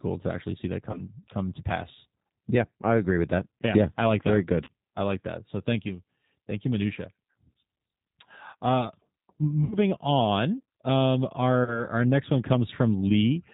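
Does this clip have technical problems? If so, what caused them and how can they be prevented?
Yes. The whole clip went through the G.729 codec at 8 kbit/s. It rebuilds speech from a vocal-tract filter, a pitch predictor and a few pulses per frame, and passes nothing above 4 kHz. The result is plainly dull, rough and slightly synthetic throughout. Using a wideband codec such as G.722 or Opus would prevent this.

VoIP packet loss concealed by the speech codec occurs at 0.91–1.01 s, 4.64–4.68 s, 9.64–9.78 s and 11.64–11.85 s. About 30 ms of audio went missing each time, and 60 ms at 9.64 s, which points to two consecutive lost packets. The decoder stretched its last pitch and filter into a buzzy tone or coloured noise that fades, and the sound stays weakened briefly afterward. A stable network with adequate jitter buffering, or forward error correction, would prevent these gaps.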